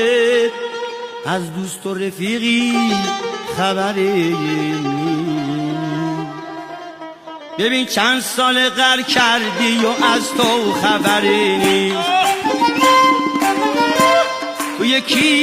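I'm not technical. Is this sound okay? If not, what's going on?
No. There is clock drift between sender and receiver. The sending device's clock runs roughly 4 percent faster than the receiving one. So sound arrives a little too quickly all the way through. The receiver cannot keep up at that pace.

To cope, it makes repeated timing corrections from 0.07 s to 15.37 s. It keeps cutting out tiny slices to catch up, leaving playback at about 103 percent speed. These cuts come at uneven moments, so you may hear small hiccups or a slightly unsteady pace.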